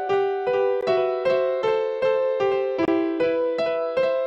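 The audio drops to dead silence twice, for 15 ms at 0.81 s and for 27 ms from 2.85 to 2.88 s, a pattern that points to a likely Bluetooth stall. Unlike a digital clipping burst or a codec glitch, each gap is clean silence.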